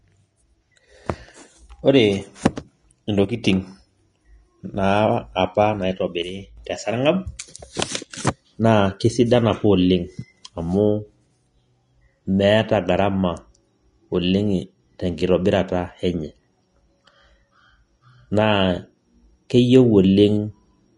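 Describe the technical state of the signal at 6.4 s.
At 6.4 s the speech falls abruptly by about 6 dB from 6.22 to 6.57 s. This is likely one channel dropping out, leaving only the shared content at half strength.

Vorbis compression is also present. Nothing sounds above 10.6 kHz, and the treble is grainy and hissy, which fits a low bitrate near 32 kbps.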